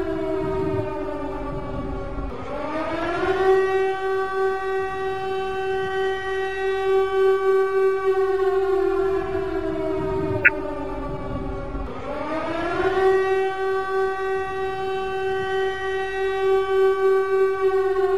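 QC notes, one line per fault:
3.00–3.05 s, corrupt frame decoded: a brief out-of-place burst, heard as a chirp, squeak, blip or noise, about 50 ms long. Damaged bits in roughly two compressed frames were decoded anyway, so misread gains and codes put energy at the wrong frequencies.
5.89 s, corrupt frame decoded: a shorter, quieter flick of the same kind, from about one bad frame.
10.43–10.49 s, corrupt frame decoded: the longest and loudest of the three, spanning about three corrupted frames.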